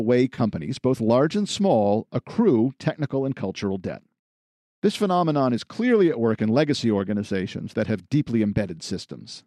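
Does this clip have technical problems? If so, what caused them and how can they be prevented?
Yes. AAC frame loss with concealment occurs at 0.35 to 0.40 s, just before "both large and small". About 30 ms of audio was lost, which fits three short frames of a likely low-delay AAC stream. The decoder filled the gap from the last good spectrum, leaving a brief smeared, noisy patch. Forward error correction or a deeper jitter buffer on the transport link would prevent it.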